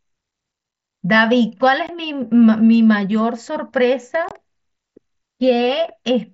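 Two brief holes cut into the speech, the first at 1.87 s, about 15 ms long, and the second from 4.29 to 4.31 s, about 22.5 ms long, each with hard edges that can click. This is unconcealed Bluetooth headset packet loss: short voice packets between headset and phone went missing and nothing was patched in. The gap lengths fit two and three lost 7.5 ms mSBC frames, on a wideband link that otherwise carries light codec graininness.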